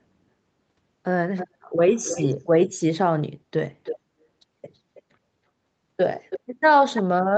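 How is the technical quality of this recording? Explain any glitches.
Faint delayed repeats of the speech intrude several times, an echo leak that is likely residual far-end audio the echo canceller failed to remove.

Echo leak at 1.37–1.48, 1.95–2.34, 2.65–2.69, 3.84–3.99, 4.95–5.02, 6.3–6.4 and 6.95–7.02 s: a delayed copy trails the speech by about 0.32 s, usually around 10 to 15 dB down and about 30 dB down near 5.0 s.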